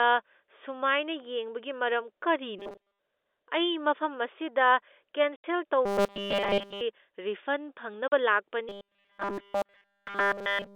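Robotic sound from repeated short buffers first appears at 2.59 to 2.99 s. Most of that stretch hardens into a rigid, metallic 200 Hz buzz, likely because audio arrived too seldom and the last 5 ms kept looping while new material was skipped. Packet loss filled with silence follows at 5.36 s: an 80 ms hole with hard edges, which fits four lost 20 ms packets replaced by nothing. The robotic buzz returns in full from 5.86 to 6.82 s. A second silent gap of 40 ms at 8.08 s points to two missing packets. From 8.69 s to the end the buzz takes over completely, all of it heard within the telephone band of 300 Hz to 3.6 kHz.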